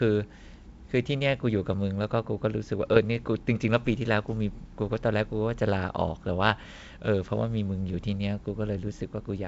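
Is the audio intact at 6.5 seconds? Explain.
Yes, the audio is intact at 6.5 seconds: the speech there comes through G.722 wideband telephone coding at 64 kbit/s, with no fault at that moment.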